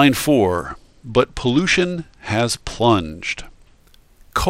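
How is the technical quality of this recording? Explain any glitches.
The speech is marred by one clear fault. A Bluetooth SBC bit pool drop runs from 0.54 s to 3.8 s. The link's encoder cut its bit budget sharply, which fits a bit pool falling from around 28 to around 11, or roughly 90 kbps. The highest sub-bands were starved of bits and the remainder were quantised coarsely. Across that stretch the treble sounds dull and muffled, with a gritty, grainy noise riding on the speech, before clarity returns.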